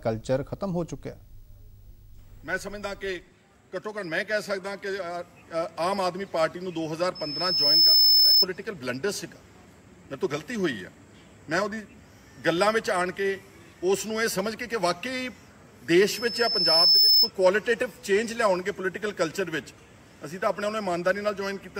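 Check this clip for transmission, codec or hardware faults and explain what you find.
There's one problem here, and it happens twice: loudspeaker feedback squeal, from 7.15 to 8.46 s and again from 16.08 to 17.30 s. Both times a steady 5.2 kHz tone swells up, over about 0.7 s the first time and 1 s the second, and ends up roughly 10 dB louder than the rest of the sound. The microphone is hearing its own loudspeaker, and at 5.2 kHz the loop gain tips above one, so that frequency feeds on itself until the amplifier limits it or the loop gets broken.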